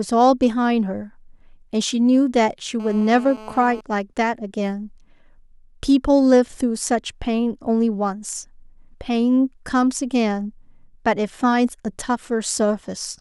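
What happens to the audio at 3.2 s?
GSM phone buzz covers 3.2 s, running from 2.80 to 3.81 s. A nearby 2G handset on a call transmits in bursts 217 times a second, and the audio circuit rectifies them into a steady, raspy, harmonic-rich buzz about 19 dB below the speech.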